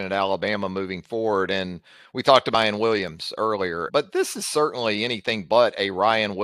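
At 2.53 s, just after "we talked", and again at 3.88 to 3.90 s, just before "this is", compressed frames are skipped. The speech jumps ahead by roughly a third and a fifth of a second, not across a silent gap.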